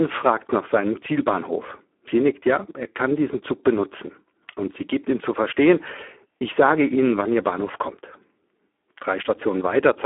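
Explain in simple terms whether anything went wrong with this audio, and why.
The speech was squeezed through the Speex codec, an older voice-chat compression scheme, at a very low quality setting for the whole clip. With so little detail kept, the voice sounds hoarse and noisy, thin like a phone line, with nothing above about 3.8 kHz.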